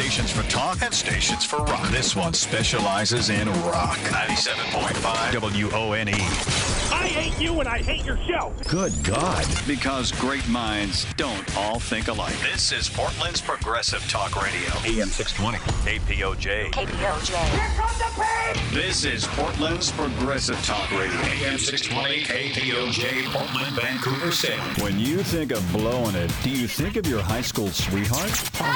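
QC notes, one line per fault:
23.01–28.75 s, imaging from sample-and-hold upsampling: a metallic fizz about 16 dB below the signal, filling roughly 11 kHz to 22 kHz. This fits a 22 kHz source raised to 48 kHz by repeating each sample without filtering, which leaves mirrored spectral copies above the original band.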